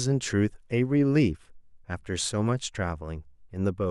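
Speech recording; no technical faults detected.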